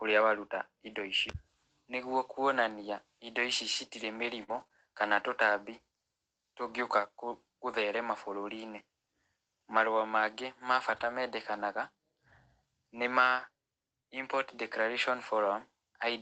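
Short concealed packet loss at 1.31 to 1.35 s: about 20 ms of audio arrived too late for the decoder, and the receiver bridged the hole by extending the preceding sound before blending back into the real signal. It is heard as a brief smear or wobble.

Repeated packet loss, producing robotic sound, runs from 4.43 to 4.71 s. Three separate gaps, the longest 45 ms, totalling about 80 ms, each get patched by continuing the last sound. Nearly a third of that stretch is synthesized, so it comes across choppy.

A lost packet rebuilt from error correction falls between 10.97 and 11.07 s. The spacing points to three separate lost packets, each recovered from a low-bitrate copy carried in the following Opus packet. The roughly 60 ms of rebuilt audio plays without a gap but sounds rougher and noisier. Here the call path limits the audio to 8 kHz anyway.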